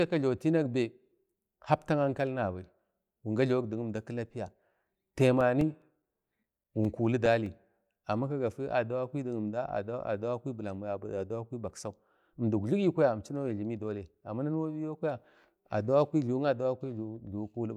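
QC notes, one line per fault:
5.2 to 7.87 s, CD scratch ticks: 14 ticks of at most about 5 ms, around five per second, before "amma kagafi". A scratch defeats error correction each revolution.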